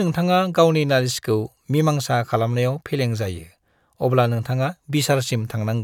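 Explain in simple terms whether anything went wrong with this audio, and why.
Listening to the recording, nothing in it stood out as having gone wrong.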